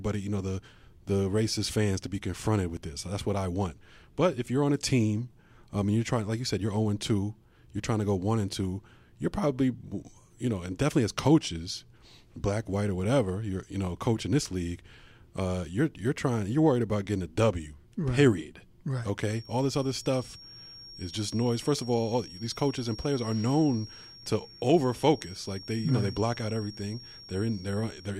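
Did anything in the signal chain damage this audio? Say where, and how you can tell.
Yes. From 19.22 s to the end, a thin, steady feedback whistle at 5.6 kHz sits about 20 dB below the speech, swelling and fading slowly in level. The likely cause is the analogue acoustic path: loudspeaker sound re-entering the microphone, holding the loop just at the edge of feedback.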